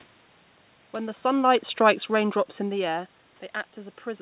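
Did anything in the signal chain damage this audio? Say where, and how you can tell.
Yes. The damage is automatic gain falling, introduced in the call processing stage. Between 1.47 s and 2.74 s the level sinks by about 3 dB. The room noise sinks with the speech, which shows the gain itself was lowered. A talker moving would change only the speech level, as happens around 1 s and 2.5 s. The AGC judged the input too loud, or its background noise too strong, and eased its gain down gradually.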